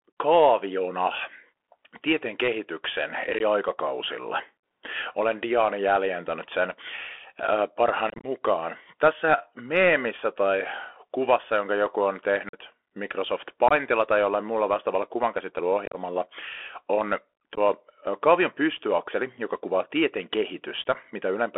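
A speech clip that sounds boxed-in and narrow throughout, with scratchy s sounds, a granular hiss under the voice and harsh edges on loud passages. That is the Bluetooth CVSD headset codec: a 64 kbps one-bit delta coder on a line band of roughly 300 Hz to 3.4 kHz, whose adaptive step can't keep up with fast high-frequency swings. Short abrupt holes break the speech at 3.39–3.42 s just after "tieteen kehityksen", 8.1–8.26 s as a chopped crackle, 12.49–12.59 s after "kuvassa jonka joku on", 13.68–13.72 s just before "tai jollain muulla vastaavalla", 15.86–15.96 s, 17.55–17.59 s and 20.94 s. These are unconcealed Bluetooth headset packet loss: dropped voice packets between headset and phone replaced by silence, totalling about 7.5 to 90 ms each.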